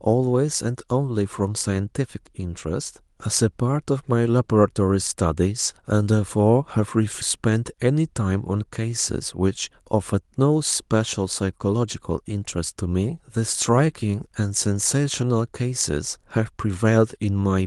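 At 7.21 to 7.23 s, a skip ahead: around 0.4 s of audio was discarded, and playback jumps straight forward with no gap, so a piece of the speech is simply missing. From 9.39 to 10.39 s, a jitter buffer speed-up: the buffer was over-full, so short pitch-period slices, roughly 70 ms in all, were trimmed, and the speech runs about 7% faster at unchanged pitch, sounding slightly hurried. Both sit on a call path whose band limit near 12 kHz fits the Opus codec.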